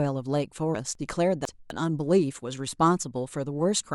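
At 0.73 s, the speech jumps forward. This is a case of compressed frames skipped. About two frames of the coded audio never reached the output, either missing from the file or rejected by the decoder as damaged. Roughly 50 ms of speech is simply gone, which fits a frame length of about 24 ms.

From 0.95 s to 1.70 s, the speech sounds jumbled. Here the chunks are out of order. A 250 ms chunk was delivered or written late. It plays two chunks after its proper place, behind audio that should follow it. No sound is lost, but the sequence is scrambled. Three hard joins break up the span, and the passage comes across as garbled.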